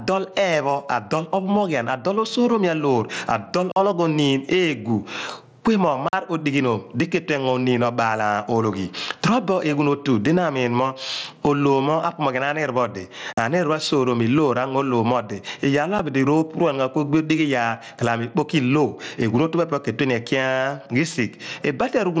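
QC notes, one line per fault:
Throughout: gain pumping. There is roughly 20 dB of gain swing, so loud and soft passages sit close together and the speech sounds squashed. The likely cause is input gain set far too high, with a fast limiter clamping down on each peak.
3.72 s, 6.08 s and 13.33 s: block of digital silence. Each is a hole of about 46 ms. The sound drops straight to silence and returns with no fade. The length fits a 2048-sample buffer that was not filled in time.
16.0 s: unconcealed Bluetooth headset packet loss. One lost headset packet leaves a 7.5 ms gap in the speech with hard edges. Nothing was patched in to cover it, so the cut is abrupt. It passes through the wideband mSBC link, which carries speech up to 8 kHz.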